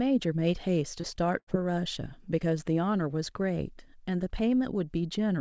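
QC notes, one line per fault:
1.01–1.06 s, short concealed packet loss: About 30 ms of the stream arrived too late for the decoder, and the receiver covered the gap with roughly 23 ms of synthesised continuation built from the preceding sound before crossfading back into real audio. The join is heard as a brief smear. As elsewhere in the call path, nothing is present above 8 kHz, consistent with G.722 at 64 kbps.
1.39–1.59 s, burst of packet loss: Several consecutive packets went missing, totalling about 90 ms. The receiver extended the last sound for around 80 ms while fading it down, which is why a held buzz or decaying hiss sits where the audio should continue. About 5 ms of extra material was added during recovery. Playback then resumes past the gap, so the section in between is simply absent.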